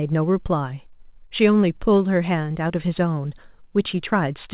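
A speech clip carried over a call link that leaves nothing above 4 kHz, with nothing technically wrong with it.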